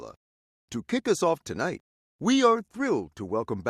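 Nothing goes wrong anywhere in the audio, so there aren't any technical faults to point out here.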